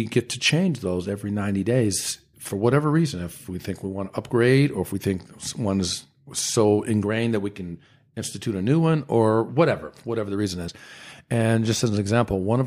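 Twice in this speech, damaged compressed frames were decoded as if valid: flipped bits gave the decoder wrong gains or misread codes, so energy landed at the wrong frequencies for a couple of frames each time. Each corrupt frame decoded is heard as a short glitch. The first, from 0.47 to 0.51 s between "get to" and "those every", peaks at about -20 dBFS. The second, weaker at about -30 dBFS, runs from 4.89 to 4.91 s just after "to upgrade or if".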